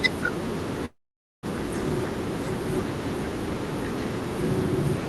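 Speech clip that's been through a call path, and at 0.85 s the audio hits a call audio freeze that runs to about 1.46 s. The last bit of sound gets stretched into a short fading buzz, then it's basically silence for roughly half a second before the speech picks up exactly where it left off. Nothing's lost, it's just pushed about 0.58 s later, which points to a late packet burst likely draining the jitter buffer. The top end also stops around 12 kHz, which fits Opus at a modest bitrate.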